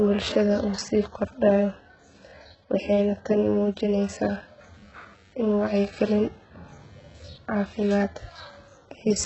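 HE-AAC compression runs through the whole speech clip. Nothing is heard above 8 kHz, and the upper range that remains sounds synthetic: s sounds come out gritty and lispy, with a metallic sheen. The likely cause is heavy HE-AAC coding, which fits a bitrate near 8 kbps. That codec sends only the lower spectrum and fakes the treble by copying lower bands upward, so the rebuilt harmonics fail to line up with the real ones.

Computer activity noise starts at 4.07 s and lasts to the end. It is a faint buzz pulsing at about 100 times per second, sitting roughly 40 dB below the speech. Its rhythm follows no pattern in the speech. Instead, changing load in the computer's processor or graphics hardware disturbs the ground shared with the audio circuit, and that interference leaks into the recording as this buzz.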